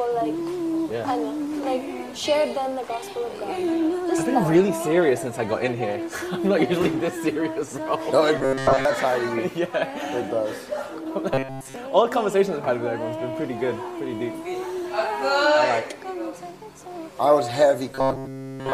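Robotic sound from repeated short buffers at 8.38–8.85, 11.34–11.76 and 17.91 s to the end: a rigid 134 Hz buzz, likely one repeated 7.5 ms chunk, rather than silent dropouts.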